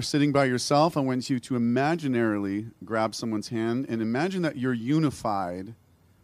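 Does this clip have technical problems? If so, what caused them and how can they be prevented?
No, nothing technical goes wrong anywhere in this speech recording, so there's no cause to track down and nothing to prevent.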